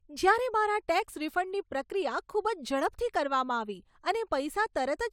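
Nothing technical stands out here; it's just a short bit of speech with no problems to point to.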